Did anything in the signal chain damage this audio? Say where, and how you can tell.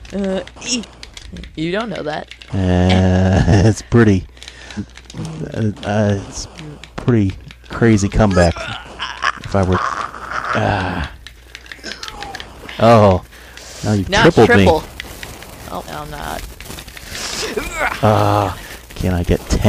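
Yes. The decoder skipped compressed frames at 0.82, 4.76, 5.83, 9.73, 11.36, 13.31, 15.86 and 18.60 s. Each jump drops whole 46.4 ms frames, roughly 0.1 to 0.2 s of audio.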